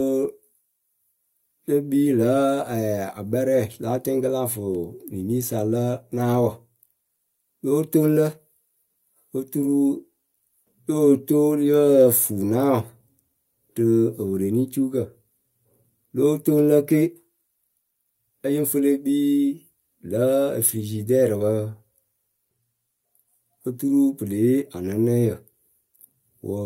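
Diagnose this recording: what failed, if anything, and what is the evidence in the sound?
Nothing failed; no stage shows any audible fault.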